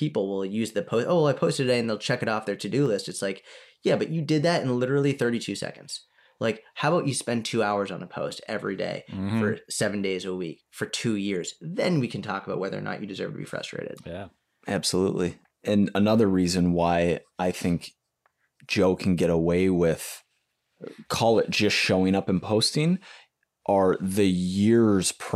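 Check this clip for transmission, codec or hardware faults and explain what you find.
One fault stands out: CD scratch ticks in the speech between 2.13 and 3.34 s. Six short ticks, the longest about a millisecond, recur roughly five times a second as the disc turns past a blemish too large for error correction, leaving interpolated or muted samples. On a waveform they appear as tiny spikes or gaps, and on a spectrogram as evenly spaced thin vertical lines.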